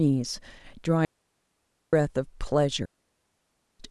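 Two digital wireless dropouts cut this speech: at 1.05 s the receiver mutes for about 0.88 s, then at 2.86 s for 0.94 s, leaving clean near-silent holes without noise bursts.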